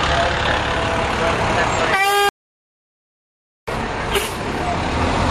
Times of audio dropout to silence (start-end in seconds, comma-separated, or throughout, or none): 2.29-3.67